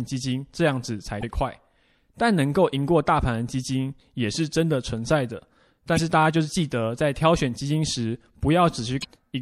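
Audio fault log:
Throughout: MP3 compression, likely. The speech has a watery, swirly quality with smeared consonant attacks and dulled treble. This fits an MP3 encode at around 64 kbps, where the encoder cuts the high band and drops weak frequency lines that flicker between frames.
1.19 s, 5.95 s, 9.00 s: damaged data in a compressed stream. Each is a brief squawk or blip lasting about 45 ms. Corrupted bytes make the decoder misread the frames there, lose sync and skip forward to the next valid frame header.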